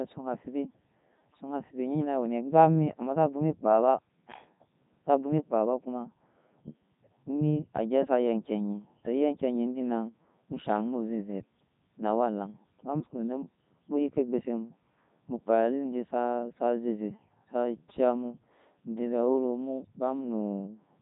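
From start to finish the speech runs through a Codec 2 vocoder, heavily damaged, which fits Codec 2's top 3.2 kbit/s mode. The waveform is rebuilt from pitch and envelope as summed sine waves, giving a buzzy, robotic tone rather than the swirly, smeared artefacts of a low-bitrate transform codec.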